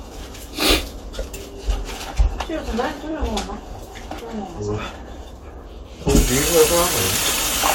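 At 3.10 s there's a quick stutter where about 21 ms of audio plays twice, and at 7.03 s a roughly 43 ms chunk, which fits two compressed frames, repeats once. These are repeated frames, so the decoder replays a block and the audio runs that much longer.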